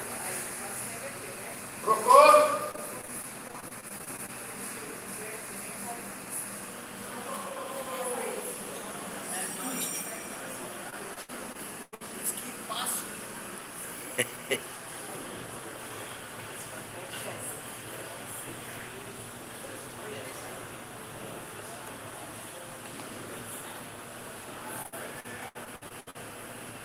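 Choppy, robotic bursts with pieces missing occur at 2.71–4.30 s, 10.90–12.02 s and 24.82–26.17 s. This is repeated packet loss: blocks of audio dropped again and again, each hole patched by stretching the preceding sound, with gaps lasting up to 98 ms.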